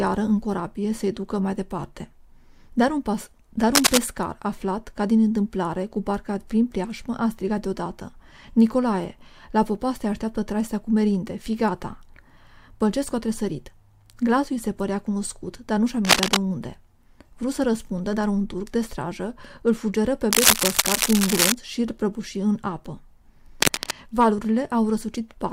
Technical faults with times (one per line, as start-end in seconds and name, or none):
3.74-3.98 cable scratch noise
16.05-16.37 cable scratch noise
20.31-21.54 cable scratch noise
23.62-23.92 cable scratch noise